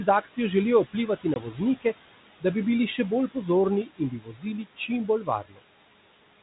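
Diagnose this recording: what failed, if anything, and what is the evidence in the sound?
Throughout the recording the background noise pumps. It sinks by about 18 dB in the gaps and comes back up under the speech. These are noise suppressor artifacts from the call-processing stage. The suppressor estimates the steady room noise, which sits about 15 dB below the speech, and attenuates the bands it judges to be noise, frame by frame. Because its gain keeps shifting with the speech, what remains of the noise does not stay steady.

The same suppressor also swallows parts of the speech itself. At 0.06 to 0.38 s, 0.92 to 1.6 s, 3.85 to 4.46 s and 5.45 to 5.59 s, short stretches of soft sound go faint. The deepest drops are about 14, 17, 17 and 16 dB. This is speech cut by the noise suppressor, again in call processing. Low-level consonants and word tails looked like background to its noise estimate, so it pulled them down along with the room noise.

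At 1.34 s there is a hard-edged 20 ms hole. The sound then comes back slightly distorted before settling. This is packet loss on the ADPCM call, at the network stage: a single lost packet was filled with silence. The G.726 stream, which sounds like the 32 kbit/s rate, codes each sample as a difference from an adaptive prediction. After the gap the decoder's predictor and step size no longer matched the sender's, so it needed some tens of milliseconds to resynchronise.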